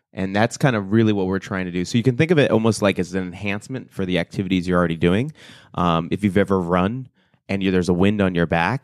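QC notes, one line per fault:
No faults found on this speech clip.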